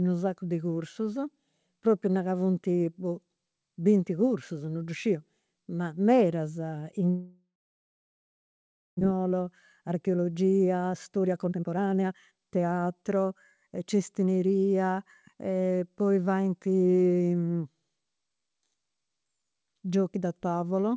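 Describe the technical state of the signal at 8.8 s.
At 8.8 s the signal is near-silent, inside a long network dropout running from 7.10 to 9.03 s. No audio likely arrived, so the receiver briefly extended the last sound, then fell to silence for about 1.5 s. About a second is lost outright. The waveform shows a flat line and the spectrogram an empty column, with no energy below the call path's 8 kHz ceiling.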